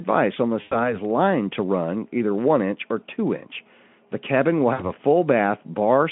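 At 0.61 to 0.94 s and again at 4.73 to 4.83 s, VoIP packet loss concealed by the speech codec: roughly 100 ms, then 60 ms, of lost audio is filled by extrapolation, giving a buzzy tone or coloured noise that fades. Spectrograms show frozen, smeared harmonics dimming; waveforms, a decaying periodic stretch.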